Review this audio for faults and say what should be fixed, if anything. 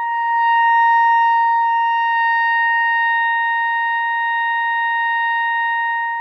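Adaptive stream at a lower bitrate from 1.43 to 3.43 s: the music abruptly loses everything above 6 kHz, fitting a drop from about 96 to 24 kbit/s AAC, then recovers. Prevent it by giving the player a larger buffer or more stable bandwidth.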